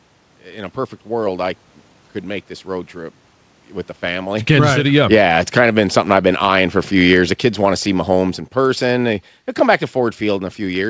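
From 4.05 s, just after "road trip with the", automatic gain falling sets in and lasts to the end. The gain control judged the input too loud. It pulls the level down slowly. Speech and room noise sink together, not the speech alone.

At 4.7 s, shortly after the talker moves at around 4.5 s, automatic gain rising overlaps it until 6.96 s. The control judged the input too quiet and lifted its gain by about 7 dB over two seconds. Speech and background swell together.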